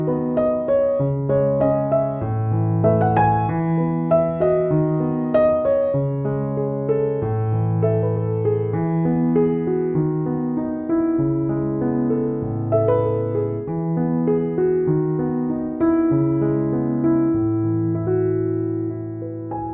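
No technical faults can be heard in the audio.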